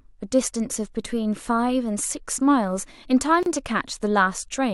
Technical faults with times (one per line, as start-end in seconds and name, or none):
3.43-3.46 gap at a join of encoded pieces